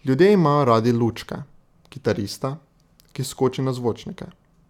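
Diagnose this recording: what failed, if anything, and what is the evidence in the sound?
Nothing failed here: there's no sign of anything going wrong anywhere along the chain from capture to playback in this bit of speech.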